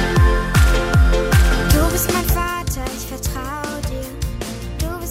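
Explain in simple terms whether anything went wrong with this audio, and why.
Between 1.88 and 2.90 seconds, the sound is turned down in coarse steps rather than one smooth slide. Each step makes a tiny click, about five times a second. Together they form a ticking rattle called zipper noise.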